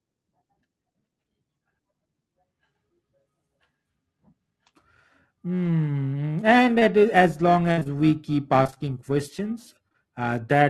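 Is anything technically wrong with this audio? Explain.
Yes. The speech has been through an Opus call path, whose band limit near 12 kHz and coding texture fit a rate around 32 kbps, and it shows four kinds of network fault.

Lost packet rebuilt from error correction, at 5.65 s: one 20 ms packet went missing, but the following packet carried a low-bitrate copy of it, which the decoder played in its place. Nothing drops out, so there is no gap. For that instant the sound just turns grainier and noisier. This is what separates it from concealment, where the missing audio is invented by stretching out whatever came before, not decoded from a copy.

Short concealed packet loss, at 6.79–6.83 s, 7.79–7.83 s, 7.83–7.87 s, 9.88–9.93 s and 9.93–9.96 s: each time, about 20 ms of audio arrived too late or not at all. The receiver carried the last sound forward, then blended back into the real signal. 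You hear a brief smear or wobble, and a short consonant can drop out. Two of these come back to back, at 7.79 s and at 9.88 s, so the smear there lasts a little longer.

Burst of packet loss, at 7.71–7.79 s: about 60 ms went missing in a single stretch, and the two short losses above follow straight after it. The concealer held the last sound and faded it as the hole went on, giving a held buzz or fading hiss that runs to about 7.87 s. The speech then picks up further along, with that part simply gone. The length and the fading are what set it apart from the smear of a short loss.

Repeated packet loss (robotic sound), at 8.63–8.82 s: five gaps, none longer than about 21 ms, follow so closely that roughly half of this 0.19 s stretch is patched audio. The patches keep interrupting one another, so the speech sounds choppy, with pieces missing. A single short loss leaves one isolated smear, whereas here the patches fall in a rapid run.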